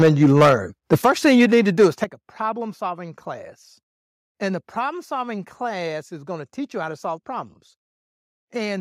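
From 0.0 to 0.54 s, microphone overload adds a harsh crackle to the loudest syllables. The peaks are likely driven about 11 dB past the converter's limit, so a sizeable share of them are flattened. At 0.02 s, the microphone volume is stepped down. Voice and background drop together by about 4 dB in one clean step, which is a sudden level change rather than distortion, likely the call software cutting the input gain.

A second overload from 0.92 to 1.86 s, about 7 dB over, clips fewer peaks. Within it, a step of about 8 dB comes at 1.02 s. Further steps of about 10 dB at 2.04 s, just before "a problem solving class", and about 2 dB at 4.89 s, before "solving class is going", leave the sound quieter but clean.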